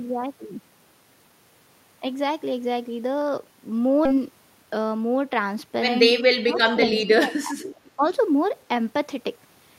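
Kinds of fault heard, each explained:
Skip ahead: At about 4.05 s the speech jumps forward with no filler. Roughly 0.7 s of audio is missing, and the two sides are spliced almost directly across a join of about 20 ms. This is what happens when a receiver discards a block of audio, either in transit or on a jitter buffer overflow, while later audio was already queued. The effect is an abrupt cut rather than a silent gap.
Jitter buffer speed-up: From about 4.16 s to 4.99 s the speech runs at about 108% of normal speed with the pitch unchanged, so it sounds hurried. The receiver was holding more audio than its target delay and trimmed it back by repeatedly removing short pitch-period-sized pieces. Around 70 ms was taken out in total.
Speech suppressed in double talk: From about 6.40 s to 7.72 s the speech level repeatedly dips, with the deepest cut around 25 dB and about a second affected overall. 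A shorter, shallower dip of about 10 dB follows at 7.96 to 8.04 s. This is likely an echo canceller that could not tell the near talker from loudspeaker echo while both sides were active, so it attenuated everything in that stretch.
Echo leak: A faint delayed copy of the speech, lagging by about 374 ms, is audible in two scraps. The first, at 6.95 to 7.00 s, sits about 15 dB below the speech. The second, at 7.63 to 7.91 s, is weaker, at about 30 dB down. It likely comes from a loudspeaker whose echo canceller left residual pickup in its microphone signal and sent it back. The returned fragments are short, overlapping the suppressed region.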